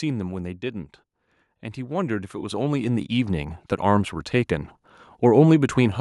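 From 1.74 s to 4.23 s the speech and the background noise behind it swell together, climbing by about 10 dB over those two and a half seconds. This is automatic gain rising: the gain control judged the input too quiet and steadily turned its gain up.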